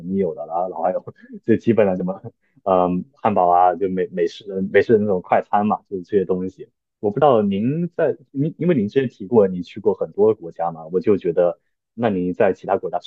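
At 7.22 s the speech lurches forward, losing roughly 30 ms of sound. This is compressed frames skipped: one whole frame of the coded audio, 32 ms long here, was never played, either because it was missing from the file or because the decoder rejected it as damaged.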